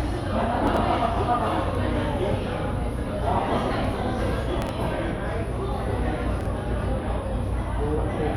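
Brief jumbled moments at 0.67–0.77 s, 4.62–4.69 s and 6.41–6.46 s are chunks out of order: a block of about 23 ms, consistent with a 1024-sample buffer at 44.1 kHz, plays three, two and one chunks late, respectively.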